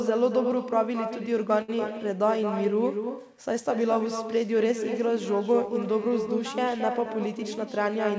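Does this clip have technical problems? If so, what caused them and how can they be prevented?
Yes. Each phrase comes back about a fifth of a second later as a thinner copy about 7 dB down. This is echo with no canceller: the far-end loudspeaker is feeding its own microphone. Turning on acoustic echo cancellation or using a headset at the far end prevents it.

From 1.62 to 1.70 s, a sound hangs for 64 ms too long, though nothing is lost. This is a short stall from a late packet, which emptied the jitter buffer. A steadier network connection or a slightly deeper jitter buffer prevents it.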